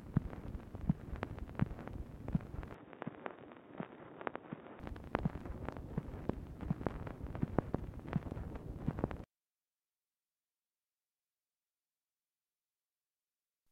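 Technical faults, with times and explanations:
2.74 to 4.80 s, input switched to a poorer device: the recording likely jumped to a different, lower-grade input for about two seconds, then returned to the original. That device passes nothing above 3.8 kHz, so the sound turns dull and boxy the moment it takes over, drops by roughly 5 dB, and brings its own faint background noise well beneath the signal. The change is seamless, with no gap at either switch, so only the shift in tone and level marks the boundaries.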